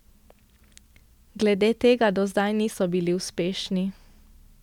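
No technical faults can be heard anywhere in the speech recording; the signal stays intact and continuous throughout.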